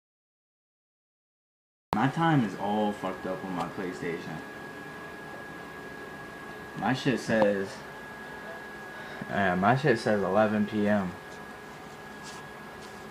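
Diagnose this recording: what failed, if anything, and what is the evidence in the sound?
What failed is the capture start, a classic cut-off start. The first 1.93 s is dead digital silence, then the sound drops in mid-flow at 1.93 s with no attack or fade-in. The recording or stream simply began late, after the source was already going.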